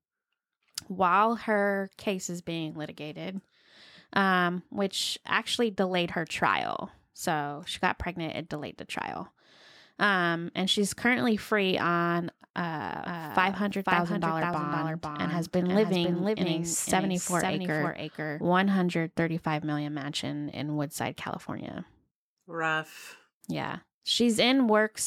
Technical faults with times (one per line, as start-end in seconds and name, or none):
13.05-18.41 doubled audio track